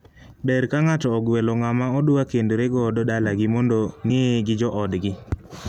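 A brief glitch interrupts this speech clip at 4.09 s, just after "kendore godo dalagi mondo", and the sound jumps slightly ahead. These are compressed frames skipped: about two frames, roughly 50 ms at 26.1 ms each, were missing or rejected by the decoder.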